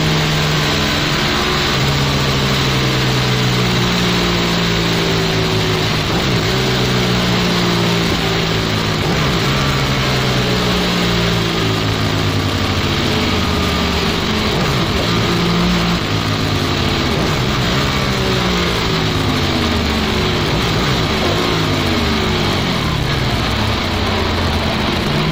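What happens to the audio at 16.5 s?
At 16.5 s the sound is dull and robotic, with a steady buzz at about 172 Hz and no clear octave drop. This is interleaved audio read as planar, present throughout the clip. Each short block of alternating left and right samples, about 5.8 ms long and consistent with a 256-sample buffer, has its first half taken as left and its second as right. Both halves play at half speed, and the block boundaries repeating 172 times a second produce the buzz.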